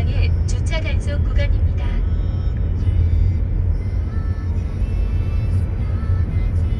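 Nothing technically wrong turns up in this short recording of sounds, so there's nothing to flag here.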